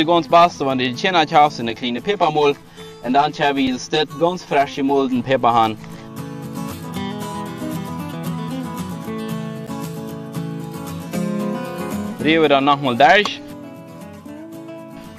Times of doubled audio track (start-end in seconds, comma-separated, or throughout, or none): none